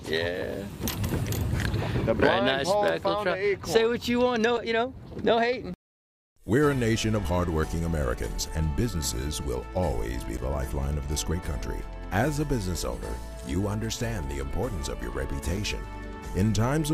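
Three brief ticks interrupt the audio, at 4.57 s, 10.37 s and 15.57 s, each a tiny hole in the sound. These are blocks of digital silence, where the signal drops abruptly to silence and returns without any fade. The first and last gaps last about 5.3 ms and the middle one about 10.7 ms, which fits output buffers of 256 and 512 samples not being filled in time.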